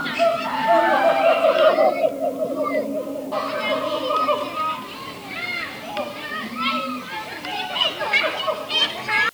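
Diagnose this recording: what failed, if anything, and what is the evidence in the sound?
The sample-format conversion is what failed: it's low bit depth with dither, running the whole clip. There's a constant, even hiss sitting roughly 30 dB under the signal, with no grit or distortion. That fits 8 bits with dither, which trades rounding distortion for steady white noise.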